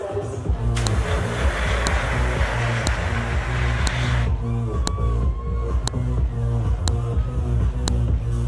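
A sharp, loud click cuts through the audio at 0.87, 1.87, 2.87, 3.87, 4.87, 5.88, 6.88 and 7.88 s. This is a file header played as audio. One-second pieces were joined with their headers intact, so header bytes sound as a snap at each join.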